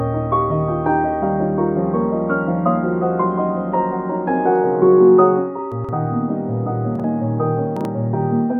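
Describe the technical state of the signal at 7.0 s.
At 7.0 s the music has chunks out of order, from 6.96 to 7.04 s. One block of about 43 ms arrived late and plays after the block that should follow it, so the two swap places. Nothing is missing, but the music jumbles briefly. The waveform shows three abrupt steps where unrelated segments butt together, and the spectrogram shows the harmonic content jumping out of sequence between those joins.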